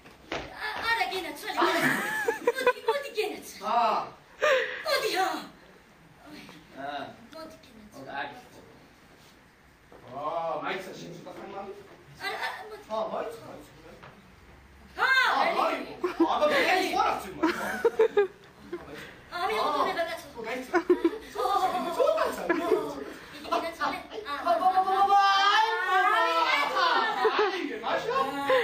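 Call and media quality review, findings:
Mains buzz, 18.09–20.18 s: steady raspy buzz, about 30 dB below signal. Probable dimmer, rectifier or unshielded line injecting spikes twice per 60 Hz cycle.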